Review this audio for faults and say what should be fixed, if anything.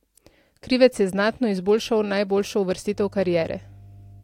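Mains hum enters at 2.90 s and runs to the end of the clip. It is a steady 50 Hz tone, roughly 25 dB below the speech. Power-line current is leaking into the signal through a ground loop or a nearby transformer. Fix it by breaking the ground loop, for example with a balanced connection or isolation transformer, and by keeping cables away from power supplies.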